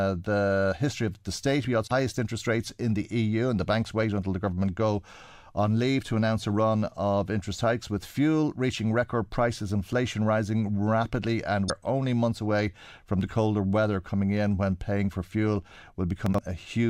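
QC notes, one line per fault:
1.84–1.91 s and 11.68–11.70 s, damaged data in a compressed stream: quick glitches, the first right before "highest interest rates in", the second between "inflation rising rapidly and" and "only months away from". Corrupted bytes threw the decoder off sync, so it garbled those frames while hunting for the next header.
16.26–16.38 s, chunks out of order: a 40 ms chunk turned up two chunks late and plays after the ones that should follow it. Nothing's missing, but the sound jumbles for a moment across the three hard joins this creates.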